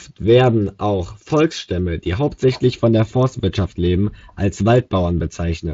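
No technical faults are present in this speech clip; it is carried by the Speex codec, and its content stops at about 7.6 kHz, which fits that codec's wideband mode.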